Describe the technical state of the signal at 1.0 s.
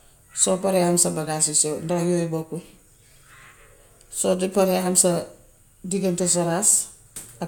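At 1.0 s the speech signal is intact, with no dropout, clipping, distortion or other technical fault audible at that point.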